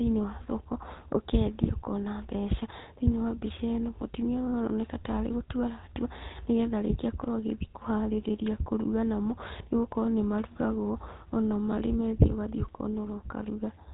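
From start to finish, the speech carries the damage of the GSM full-rate codec, plainly audible as a buzzy, gravelly roughness, which fits the 13 kbps full-rate coder. The codec rebuilds the voice from a vocal-tract model fed by regularly spaced pulses, discarding two of every three excitation samples, so fine detail turns to grit. On a spectrogram, energy stops dead at 4 kHz, and harmonics look smeared and blocky rather than cleanly striated.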